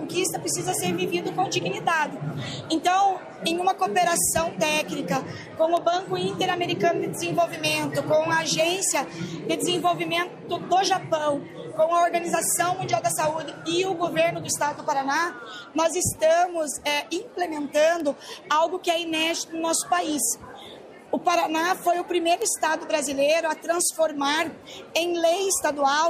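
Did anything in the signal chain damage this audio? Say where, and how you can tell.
Yes. Four isolated bit error spikes, sharp ticks at 0.87, 5.77, 18.0 and 22.42 s, peak around -15 dBFS, the last nearer -9 dBFS. Each fits a single corrupted sample, or a brief run at 5.77 s, where a flipped bit in memory, storage or a digital link briefly shifted the value by a power of two. Unlike a dropout, there is no gap. Unlike clipping, the ticks are broadband and ignore the signal's level.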